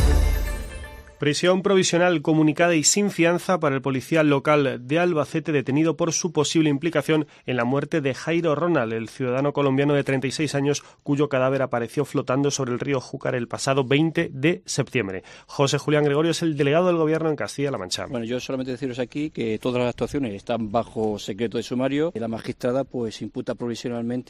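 Nothing in the recording stood out as a technical problem on listening.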